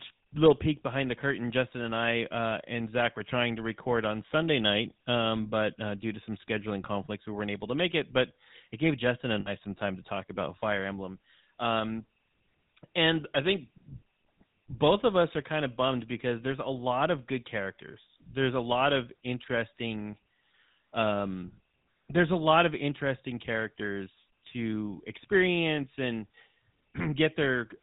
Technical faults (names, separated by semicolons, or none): GSM full-rate codec; lost GSM frames